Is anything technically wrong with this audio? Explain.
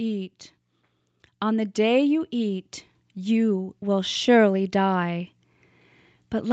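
Yes. From 1.46 s to 5.35 s there is automatic gain rising. The gain control judged the input too quiet and slowly raised its level, by about 7 dB. The speech and the background noise swell up together across those four seconds.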